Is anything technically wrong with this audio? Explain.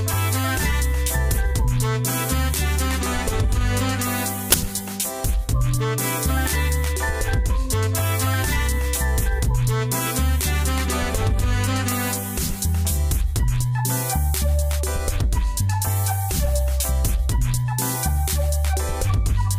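Yes. At 4.52 to 4.54 s there is a sudden, very loud burst of harsh digital noise lasting about 20 ms. This is an uninitialised buffer: a 20 ms block was played out before any audio had been written into it, so leftover memory contents were reproduced as samples.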